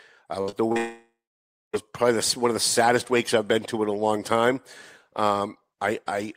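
Speech, and at 0.41 to 0.50 s the last sound is held and fades as a buzz or hiss before jumping ahead, a burst of packet loss: about 60 ms never arrived in time, so the receiver stretched what it had and then skipped the missing part. Right after, at 0.50 to 0.54 s and again at 0.72 to 0.78 s, brief smears or wobbles blur the sound. These are short concealed packet losses of about 20 ms and 40 ms, patched over by extending the preceding audio and blending back. From 0.78 to 1.75 s the sound trails off into a fading buzz or hiss, then roughly 600 ms of silence or low steady noise, before resuming at "probably the one of". This is likely a long network dropout, losing nearly a second of audio that the receiver could only cover briefly before giving up.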